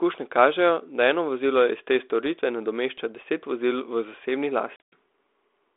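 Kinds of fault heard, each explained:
Packet loss on an ADPCM call: just after "deset vozil v zasebni", around 4.76 s, about 140 ms goes missing in chunks over 160 ms, the longest gap 100 ms. The decoder's predictor and step size lose sync with the sender's, so the speech comes back unsteady before settling.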